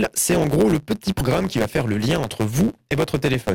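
From the start to the end, a block size mismatch (truncated) runs through the speech: each block handed on is longer than the next stage reads, so its tail is dropped. That leaves a steady buzz at about 109 Hz, the rate at which blocks are cut, and the speech plays 1.09 times fast. Its timbre stays, which separates it from a sample-rate error, where speed and pitch shift together.

At 1.18 to 1.21 s there is damaged data in a compressed stream, a brief glitch lasting about 30 ms. Bytes in the compressed stream were corrupted there, so the decoder misread those frames, lost sync and hunted for the next valid header before speech resumed. Unlike the buzz, which repeats evenly throughout, this is a single isolated blip tied to one stretch of bad frames.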